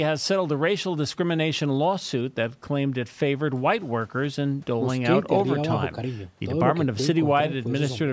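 Listening to this speech recording, nothing technical stood out as a fault, and the trimmed lowest bass and absence of content above 8 kHz are simply what normal call microphone processing leaves behind.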